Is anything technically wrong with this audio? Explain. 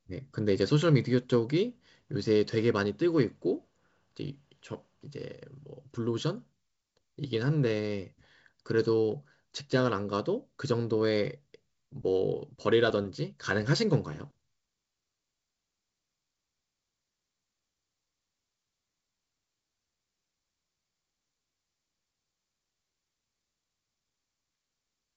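No, the speech has no technical fault, and the G.722 wideband telephone coding at 64 kbit/s shows only its normal band limit, with nothing above 7.7 kHz.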